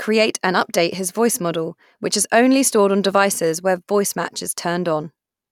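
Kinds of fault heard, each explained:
No kinds of fault are heard in this clip.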